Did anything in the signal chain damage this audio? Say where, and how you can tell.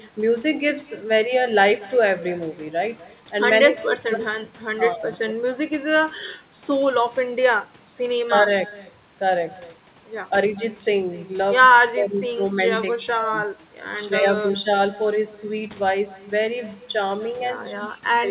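Yes. Throughout the speech, a faint, thin copy trails each phrase by around a fifth of a second, about 22 dB down. That is echo with no canceller in call processing: the far end's loudspeaker leaks into its microphone and nothing removes it.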